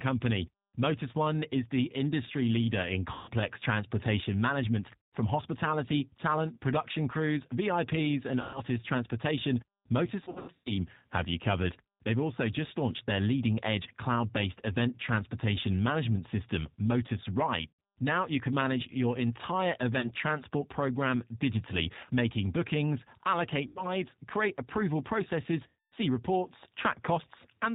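Speech throughout passes through the G.729 codec at 8 kbit/s, which cuts everything above 4 kHz and leaves a rough, synthetic edge. VoIP packet loss concealed by the speech codec occurs at 3.13, 5.12, 8.42, 10.24 to 10.73 (scattered, before "have you covered"), 17.67, 20.0 (between "can manage your entire" and "transport program digitally making"), 23.67 (before "create approval processes") and 25.68 s. Each time, the decoder extrapolates the missing 30 to 300 ms from its last frames, producing fading buzzy or noisy smears.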